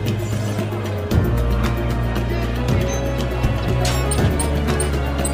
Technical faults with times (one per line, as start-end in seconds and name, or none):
2.57-4.90 drift correction step